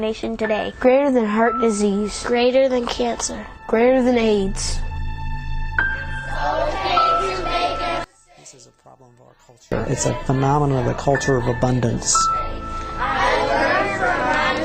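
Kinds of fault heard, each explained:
Call bitrate drop: From 3.65 to 7.58 s the coding gets coarser, which fits the encoder being pushed from around 96 kbps down to about 23 kbps after the bandwidth estimate fell. It stays at that low quality for most of the stretch, then clears before the end.
One channel inverted: From 8.04 to 9.72 s the sound drops by about 28 dB. Only a leftover remains, and then it comes back. That's likely one stereo channel with flipped polarity, so the shared content cancels when the two are folded down to mono.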